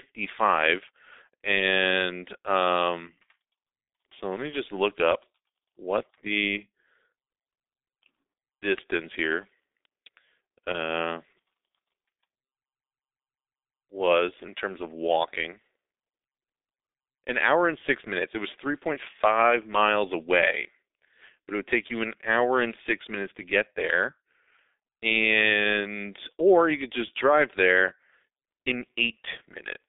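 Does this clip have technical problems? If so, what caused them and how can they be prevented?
Yes. G.723.1 codec damage runs throughout: the speech is confined to roughly 250 Hz to 3.7 kHz and sounds muffled and hoarse, with smeared consonants. That fits a 6.3 kbit/s mode, where 30 ms frames and a slowly updated voice model discard fine detail. Prevent it by carrying the call over a wideband codec such as Opus instead of legacy G.723.1.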